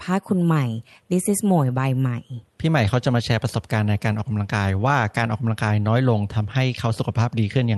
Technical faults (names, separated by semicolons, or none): none